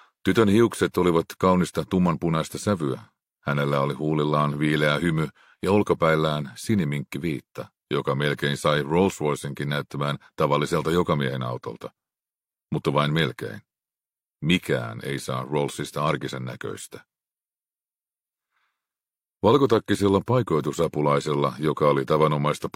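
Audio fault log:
No faults detected in this clip.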